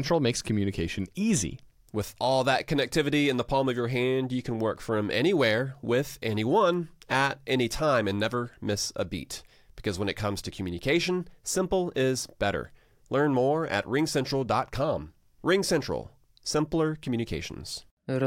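Speech with word clock ticks from 0.81 to 17.59 s: about twenty single-sample slips, roughly one per second, from an unlocked digital receiver drifting around 20 ppm.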